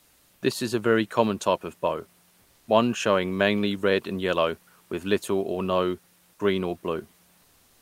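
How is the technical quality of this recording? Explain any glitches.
Three short pauses have comfort noise in place of the background: 0.00–0.41 s, 2.41–2.67 s and 7.41–7.82 s. The real room noise, about 39 dB below the loudest speech, gives way to a steady, featureless hiss at nearly the same level, within about 1 dB. This is likely discontinuous transmission, consistent with Opus DTX, where the receiver synthesises filler noise while the sender pauses.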